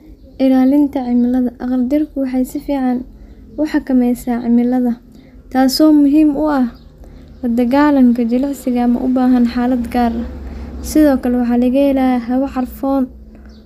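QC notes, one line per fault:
QC notes: no fault found in this speech recording.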